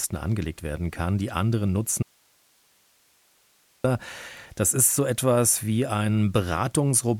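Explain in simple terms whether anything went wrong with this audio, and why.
Something did go wrong here. From 2.03 to 3.84 seconds, the speech suddenly cuts out for about 1.8 seconds. This is an audio dropout to a faint residue. The gap is not true silence. Only a soft hiss remains, far quieter than the speech. The sound stops and returns abruptly, not like a natural pause or fade. The likely cause is that the signal was briefly lost while the recording chain stayed switched on.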